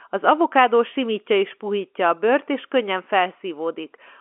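No technical faults can be heard anywhere in the speech. It has the narrow sound of G.711 telephone coding, with the line passing about 250 Hz to 3.4 kHz and nothing above that.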